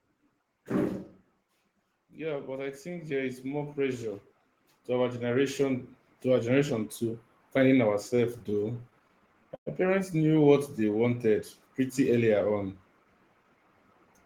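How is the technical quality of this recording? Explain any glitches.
The recording has four distinct glitches, all of the kind you get from a live network call with automatic level control.

From 1.94 s to 12.06 s there's automatic gain rising. The gain control decided the input was too quiet and kept nudging its gain upward, ending up about 16 dB louder. Because it boosts everything it receives, the speech and the background noise swell together, creeping up over those ten seconds rather than jumping at any single point.

Between 8.07 s and 9.68 s you get repeated stalls, a stutter. Packets kept turning up late, so the jitter buffer ran dry well over a dozen times. Each time, the receiver stretched out the last bit of sound until fresh audio arrived, about 270 ms in total, with the longest hold around 113 ms. Nothing is actually lost, but the speech drags and stumbles for that stretch.

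From 10.45 s to 11.03 s there's a jitter buffer slow-down. The buffer was running low, so the receiver rebuilt its reserve by repeating single pitch periods and slivers of pause, adding about 60 ms. The speech plays at roughly 91% speed while the pitch stays put, so sounds come out drawn out.

Finally, from 13.00 s to 13.64 s there's a jitter buffer speed-up, the mirror image. Too much audio had piled up in the buffer, so the receiver snipped out tiny pitch-period chunks, about a tenth of a second altogether. The speech runs at about 113% speed at unchanged pitch and sounds a bit hurried.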